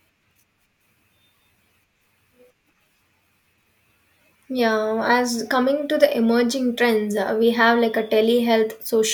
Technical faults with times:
none

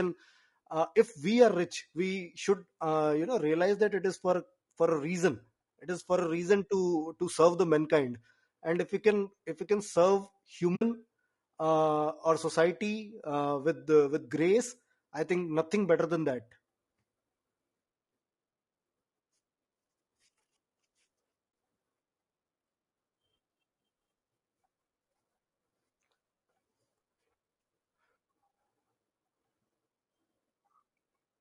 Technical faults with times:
0.00-31.41 low-delay AAC compression
10.75-10.82 AAC frame loss with muting
21.51 AAC frame loss with muting

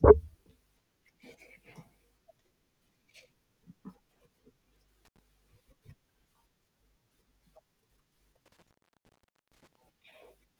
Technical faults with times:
5.05-5.19 intermittent contact
8.46-9.75 intermittent contact

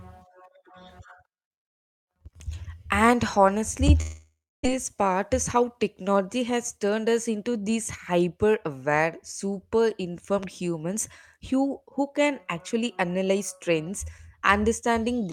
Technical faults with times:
4.01-4.67 long network dropout

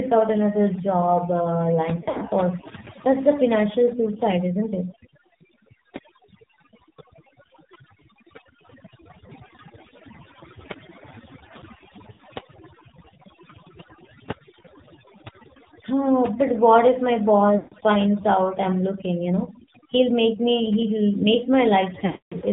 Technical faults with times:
0.00-22.52 overdone noise removal
0.00-22.52 AMR narrowband mobile codec
1.96-2.22 lost AMR speech frames
12.12-12.23 lost AMR speech frames
17.58-17.74 lost AMR speech frames
22.06-22.34 lost AMR speech frames

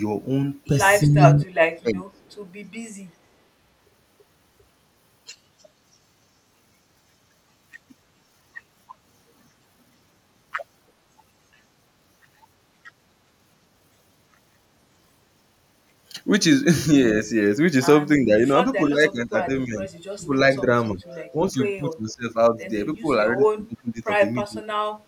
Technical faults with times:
1.04-2.20 speech suppressed in double talk
2.16-2.50 echo leak
18.17-20.32 speech suppressed in double talk
20.92-22.36 speech suppressed in double talk
23.00-24.65 speech suppressed in double talk

